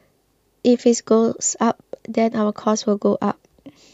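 No technical faults can be heard anywhere in the recording. The speech runs from beginning to end without any interruption or disturbance.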